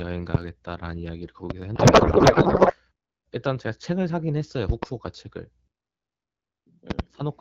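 At 0.35 s and again at 1.50 s a single loud pop cuts through, the second about 25 dB above the speech, likely a voltage step from a plug, switch or static. Each shows as a sharp vertical spike on the waveform and a full-height stripe on the spectrogram, with the sound continuing beneath.

From 1.75 to 2.80 s a codec payload misread replaces the speech with garbled noise and warble that barely tracks it. Octet-aligned AMR frames are being unpacked as bandwidth-efficient ones, so every field lands wrong. On the spectrogram the formant structure dissolves into smeared, patchy energy.

Double pops return at 4.69 to 4.85 s and 6.90 to 7.02 s, roughly 20 and 25 dB above the signal. Each appears as paired spikes on the waveform.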